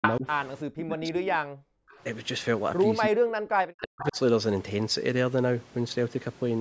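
Speech suppressed in double talk affects this speech recording at 0.0–0.26 s, 0.7–1.23 s and 3.08–4.17 s. The voice dips by about 25 dB in the first stretch and by about 40 dB in the later two, and is affected for roughly a second in the longest. The likely cause is the echo canceller failing to tell the near talker from loudspeaker echo while both sides spoke, and turning both down. An echo leak appears at 0.02–0.13 s, 1.89–1.97 s and 4.0–4.15 s as a delayed copy of the voice arriving 339 ms, 350 ms and 363 ms late. The copy is about as loud as the speech in the first case, about 30 dB below it in the second and about 10 dB below in the third, most likely because a far-end loudspeaker echo slipped past that side's canceller and was sent back. Background gated by the echo canceller occurs at 1.51–1.89 s. The room sound drops by about 40 dB for a little under half a second while the canceller clamps the microphone during loudspeaker playback, then returns when it releases.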